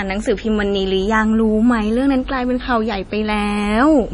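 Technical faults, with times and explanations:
Throughout, MP3 compression: heavy lossy coding, likely MP3 at a rate that fits about 32 kbps, has removed everything above 10.6 kHz and zeroed weak frequency lines that switch on and off between frames, leaving the speech dull, watery and swirly, with smeared attacks.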